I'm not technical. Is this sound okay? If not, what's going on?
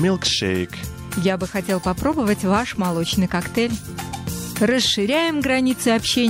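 No. At 2.13 s there is a gap between stream segments: two pieces of the audio don't meet, leaving a sharp silent hole of about 8 ms. Nothing is lost.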